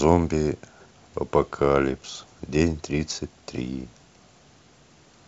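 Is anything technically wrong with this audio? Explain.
No, nothing is technically wrong with this audio.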